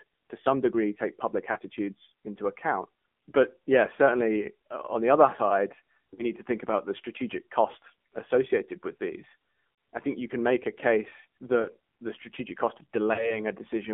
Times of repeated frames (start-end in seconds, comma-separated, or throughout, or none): none